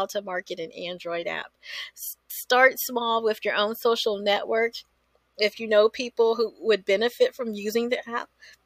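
No technical faults are audible.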